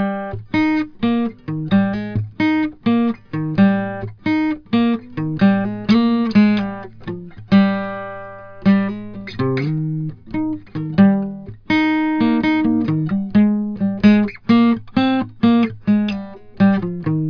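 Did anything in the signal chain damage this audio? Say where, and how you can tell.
No, nothing in the signal chain damaged this music.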